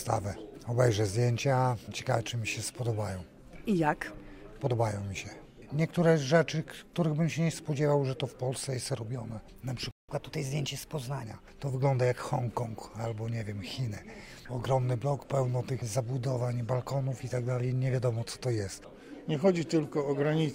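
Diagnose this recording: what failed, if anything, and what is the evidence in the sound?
Playback stall at 9.91 to 10.09 s: the sound drops out mid-flow for about 0.17 s. This points to the playback stage, likely a player that ran dry of buffered data or had its output thread blocked.

Catch-up at higher speed from 10.09 to 11.23 s: immediately after the stall the audio runs 1.15 times faster, pitched up by roughly two semitones, as the player resamples its backlog to recover the lost time before returning to normal rate.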